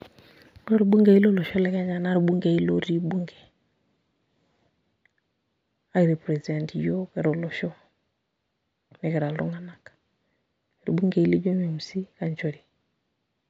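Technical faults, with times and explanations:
0.0–1.5 s, imaging from linear upsampling: straight-line interpolation, fitting a 16 kHz to 48 kHz rise, dulls the top and leaves faint mirrored energy, roughly 45 dB down, at 8–16 kHz, heard as metallic shimmer.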